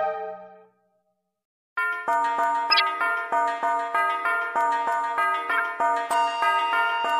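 A short burst of wrong-frequency noise cuts through the audio from 2.7 to 2.82 s, peaking around -5 dBFS, and a second, somewhat quieter blip follows from 5.51 to 5.6 s. Both are a corrupt frame decoded: damaged bits in the compressed stream were played rather than concealed, so misread gains and codes placed energy where none belonged. The lengths point to a run of around five frames in the first event and about three in the second.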